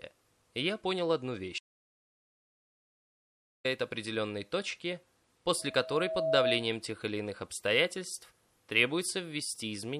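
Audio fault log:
1.59–3.65 s, audio dropout to silence: input likely lost, leaving 2.06 s of silence; the waveform flatlines and the spectrogram goes completely blank, with no room tone.
5.59–6.74 s, loudspeaker feedback squeal: the mic–speaker loop exceeds unity gain at 646 Hz, so the tone swells over roughly 0.7 s to about 5 dB above the sound, forming a bright horizontal spectrogram line.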